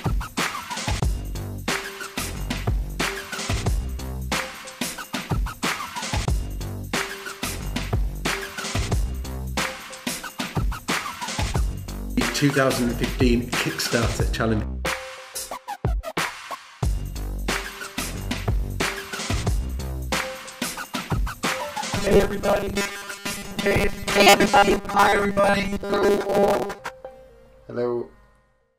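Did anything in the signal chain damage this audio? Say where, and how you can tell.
Yes. At the driver or buffer stage, new audio likely arrived too seldom, so a 5 ms slice was replayed over the skipped audio. From 21.97 to 26.79 s this robotic sound from repeated short buffers becomes a rigid 200 Hz buzz.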